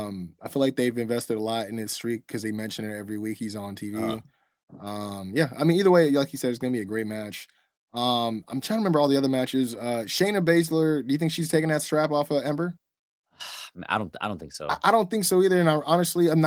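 Recorded speech, with no audible technical faults anywhere.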